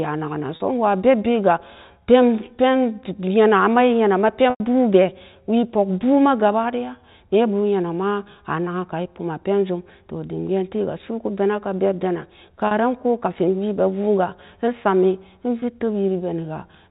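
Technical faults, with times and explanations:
0.56–0.60 s, 4.50–4.60 s, 12.67–12.71 s and 15.60–15.62 s, packet loss with pitch repetition: audio drops out for 40, 100, 40 and 20 ms, right after "naken nan" in the first case, and the receiver bridges each gap by looping the last pitch cycle. The short ones come across as a brief buzzy hold. The 100 ms one at 4.5 s outlasts the fade, so it sags toward silence before the sound cross-fades back in, all within the 4 kHz telephone band.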